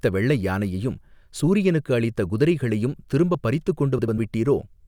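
At 1.36 s, right after "வெள்ளை யானையையும்", the sound skips. It skips again at 3.35 s, after "யானையையும் சூரியனுக்கு அளித்த குதிரைகளையும்". The likely cause is audio missing between chunks. Roughly 10 ms vanishes at each 2-second chunk boundary, and the edges join with no gap.

From 3.99 to 4.18 s, there is a garbled flutter. These are frames out of order. Two neighbouring 96 ms blocks swapped places, which fits blocks of three frames each. They play in reverse order, with nothing lost.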